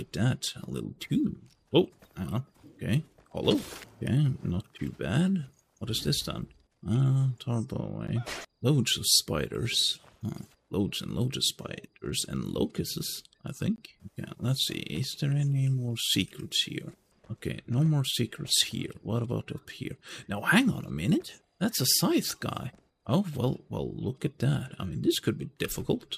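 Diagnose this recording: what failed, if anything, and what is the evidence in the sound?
The codec stage is the culprit: a gap at a join of encoded pieces, twice. The sound drops out for about 10.5 ms at 8.07 s and 20 ms from 13.76 to 13.78 s, then resumes where it stopped. Separately encoded segments were butted together with each run's start delay and last-frame padding left untrimmed.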